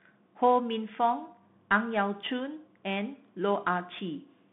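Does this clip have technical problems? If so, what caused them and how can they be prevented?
Yes. The speech went through a Bluetooth CVSD headset codec, which sends one bit per sample to step the waveform up or down, consistent with a 64 kbps link. The sound is confined to about 150 Hz to 3.6 kHz, with nothing above 3.8 kHz. Plainly audible slope-overload distortion and granular hiss result. Prevent this by using a wideband codec such as mSBC or LC3.

From 0.12 s to 4.51 s there are clock slip clicks. Two unsynchronised clocks, likely differing by around 200 ppm, force a single sample to be dropped or repeated roughly every tenth of a second. This produces about fifty faint, evenly spaced ticks. Prevent them by locking both devices to one clock or adding adaptive resampling.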